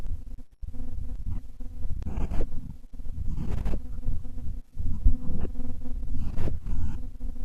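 No audible faults in this speech.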